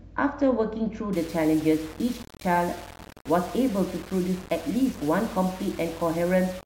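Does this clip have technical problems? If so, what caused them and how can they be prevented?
Yes. From 1.13 s to the end at 6.66 s, the speech takes on a harsh, grainy distortion that rises and falls with the voice. Quieter syllables turn rough and the softest moments sputter or drop out entirely. This is likely low bit depth without dither: the audio appears to be rounded to only 5 bits with no dither added, so the rounding error tracks the signal and sits roughly 20 dB below it. To prevent this, keep at least 16 bits and apply dither whenever you reduce bit depth.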